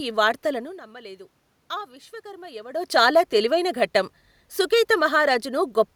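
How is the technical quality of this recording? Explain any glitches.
There's one glitch worth flagging: automatic gain rising, from 0.85 to 2.88 s. Around half a second in, the talker seems to drift away from the mic and the input drops by about 17 dB. The automatic gain control notices the quieter signal and slowly turns itself up by about 4 dB over those two seconds. Because it boosts everything, the voice and the room noise swell together. Near 2.5 s the talker shifts again.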